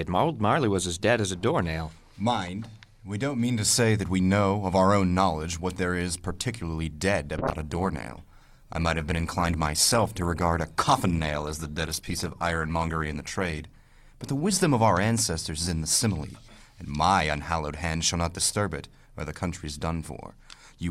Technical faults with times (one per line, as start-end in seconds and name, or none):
7.38-15.87 call bitrate drop